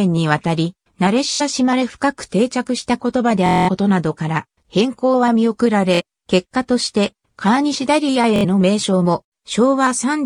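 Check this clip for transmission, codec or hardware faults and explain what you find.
Four Bluetooth stutters occur, at 1.33–1.41 s, 3.46–3.69 s, 5.95–6.01 s and 8.36–8.45 s. Each time, late or lost wireless packets left the receiver replaying a roughly 23 ms slice, so the sound buzzes in a machine-gun stutter for about 70, 210, 46 and 70 ms. The sound then jumps ahead as though it had kept playing. This repeated-slice buzz distinguishes it from a plain dropout, which would fall silent instead.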